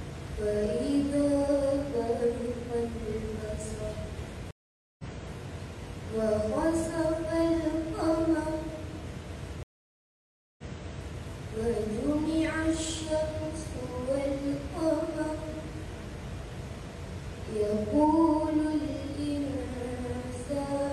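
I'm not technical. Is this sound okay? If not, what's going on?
No. There are two stream reconnects, at 4.51 to 5.04 s and 9.63 to 11.18 s. The connection dropped, the sound went silent for about half a second, then nearly a second, and restarted elsewhere: first skipping ahead about 0.4 s, then replaying 0.6 s. A simple dropout would pick up where it stopped.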